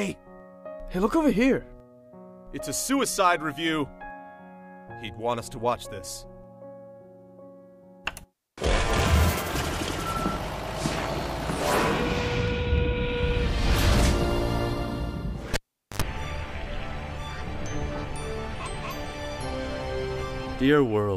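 At 15.54 s the cable is pulled and plugged in while live. A pop opens a gap of near silence lasting about 0.43 s, with 79 ms of 50 Hz mains buzz as the tip makes partial contact, then a second pop at 16.02 s as the signal returns.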